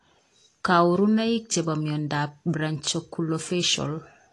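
From start to finish the speech carries plainly audible AAC compression damage, likely from low-bitrate AAC-LC around 32 kbps. Nothing survives above 11.5 kHz, and sibilants turn fizzy and warbling. A plain low-pass filter would dull the top but leave that swirling, holed texture absent.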